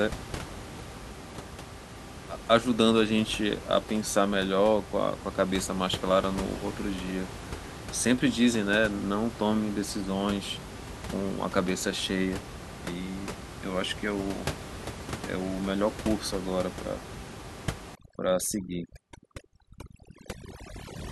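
From 17.95 s to the end at 21.11 s, overdone noise removal strips the room noise, which sat only about 12 dB below the speech, leaving a lowered background broken into twinkling specks. A spectrogram shows scattered isolated time-frequency blobs and hollowed-out gaps between speech harmonics.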